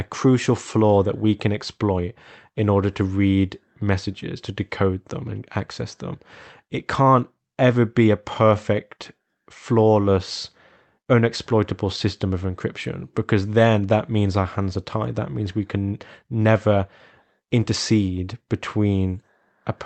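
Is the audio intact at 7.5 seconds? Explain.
No. The audio at 7.5 s falls within a long run of repeated timing corrections that lasts from 0.25 s to 19.07 s. These corrections come from clock drift between sender and receiver: the sending side's clock runs roughly 4% fast, so the jitter buffer keeps filling faster than it plays out. To stay in step, the receiver keeps trimming tiny slices of audio, which makes delivery run at about 104% of normal pace. What you hear is small hiccups and a faintly rushed, uneven tempo rather than any obvious break.

A few things distinguish this from packet loss or dropouts. There are no silent holes, no smeared concealment patches and no sudden bursts of damage. Every edit pushes in the same direction, shortening rather than stretching, and the edits are scattered irregularly across almost the whole clip instead of clustering around one moment. The audio also passed through an Opus call codec, which cuts off the upper spectrum around 8 kHz.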